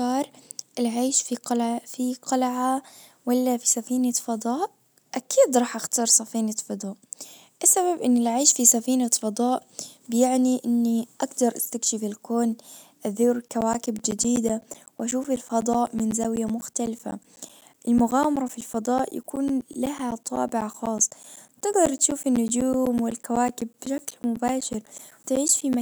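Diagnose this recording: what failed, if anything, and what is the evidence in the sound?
Driver/buffer stage: periodic USB or driver dropouts from 13.48 s, after "اجدر استكشف الكون أزور", to 25.74 s. The bus stalls every 0.125 s, blanking roughly 10 ms and leaving evenly spaced waveform gaps and vertical spectrogram clicks.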